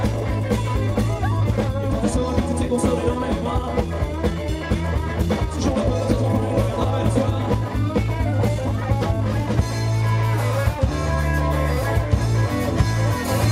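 From 0.00 to 9.64 s the audio plays as a time-stretched section, running at about 1.35 times normal speed while its pitch holds steady. The pace is rushed, and it settles back to a natural rate abruptly at 9.64 s. The likely cause is software compressing this stretch to fit a shorter length, preserving pitch by discarding small pieces of the waveform rather than resampling.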